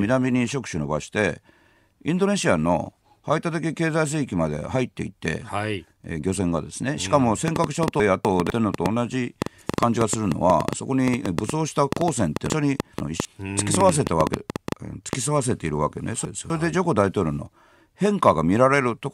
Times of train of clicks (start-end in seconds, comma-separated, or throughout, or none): 7.48-15.14